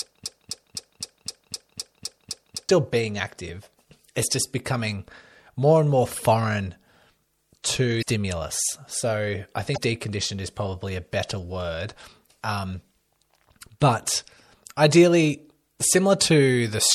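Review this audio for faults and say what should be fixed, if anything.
The speech opens in a broken-record loop, already under way at 0.0 s and running to 2.69 s. A slice of about 0.26 s repeats exactly, nine times back to back, before playback moves on into "being active". The likely cause is a player or stream that stalled and kept resending the last fragment it held, so the audio meant for those seconds is gone. On a waveform the identical blocks tile at a fixed period, and a spectrogram shows the same pattern stamped repeatedly. Buffering with stall detection, so output falls silent or resyncs rather than replaying stale data, would prevent it.

Damaged data in a compressed stream shows up twice, as short blips at 7.98 s and at 9.73 s, the second just before "deconditioned is probably a". Each lasts about 45 ms. Corrupted frames make the decoder misread its data, lose sync and hunt for the next frame header. 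A spectrogram shows a brief broadband smear or odd tonal streak, and the waveform shows an abrupt discontinuity. Checksummed transport and intact file transfer would prevent it.

MP3 compression is plainly audible throughout, giving a watery, swirling texture with smeared consonant attacks, and the likely cause is encoding at a low bitrate, which fits about 64 kbps. Short of bits, the encoder cuts the treble at a fixed frequency and drops weak frequency lines that flicker between frames. On a spectrogram this appears as a hard horizontal ceiling with patchy, blinking holes beneath it. Encoding at a higher bitrate or keeping a lossless source would prevent it.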